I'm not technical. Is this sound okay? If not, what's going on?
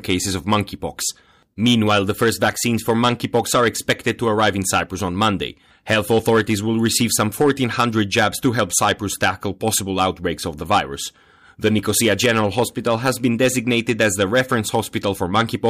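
No. The speech has hard clipping from start to finish. The recording was pushed louder than the equipment could handle. So the tops of the loudest moments got sliced off flat. Only a small share of the sound hits that ceiling. But each time it does, you hear a rough, crackly edge on the strongest syllables. Think of a speaker turned up too far. It affects the whole clip, not just one spot.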